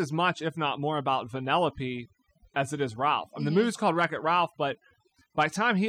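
From start to finish there's overdone noise removal on this speech. The reducer was pushed too hard, so bands sitting near its noise estimate get cut away, softer parts of the voice included. The gaps go almost silent with little twinkling specks.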